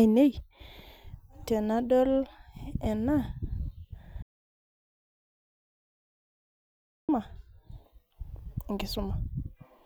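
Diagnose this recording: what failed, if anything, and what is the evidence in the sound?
Audio dropout to silence, 4.22 to 7.09 s: the speech cuts off mid-flow into 2.86 s of silence with no room tone. The likely cause is a lost input link or device.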